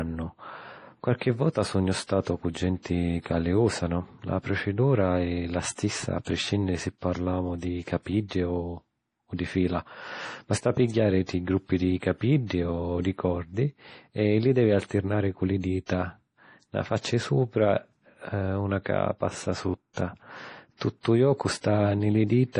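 Throughout the speech, the sound is watery and swirly, with metallic chirps on s sounds and softened consonant attacks, and nothing is present above 10.5 kHz. This is likely heavy MP3 compression, consistent with a bitrate around 32 kbps. Short of bits, the encoder has cut the treble at a fixed frequency and discarded weak frequency lines, which flicker on and off between frames and produce the swirling texture.

Pre-echo appears at 6.24 s (spreading 28 ms), 11.26 s (25 ms), 12.46 s (38 ms), 15.86 s (36 ms) and 19.93 s (38 ms). In each case a sharp attack sits late in a transform block, so quantisation noise sized for the loud onset is spread back into the quiet moment before it. Each attack is preceded by a brief hiss and sounds blurred rather than crisp.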